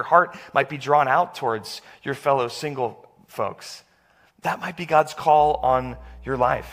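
A speech recording that picks up mains hum from 5.37 s to the end at 6.73 s: a steady 60 Hz tone, around 20 dB below the speech, probably from a ground loop, appearing on a spectrogram as a thin horizontal line at 60 Hz.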